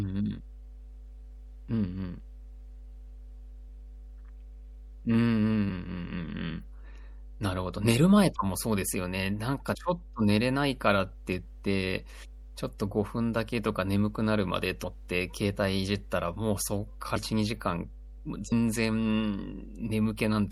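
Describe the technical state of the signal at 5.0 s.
At 5.0 s a steady low drone sits under the speech, a 50 Hz tone with low harmonics, running throughout the clip. It is loud, only about 15 dB below the speech itself, so it fills the gaps between phrases. This is mains hum: the power line's frequency has leaked into the signal, through a ground loop or a transformer close to the cabling, and rides along as a constant tone.

The speech at that moment also sounds watery and swirly, with the top end dulled and s sounds turning metallic and chirpy. The smearing is present across the whole clip and plainly audible. The likely cause is MP3 compression at a low bitrate, with the character suggesting something around 64 kbps. Short of bits, the encoder trims the treble above a fixed cut-off and drops quieter frequency components. Those components flicker in and out from frame to frame, which produces the unstable, burbling texture.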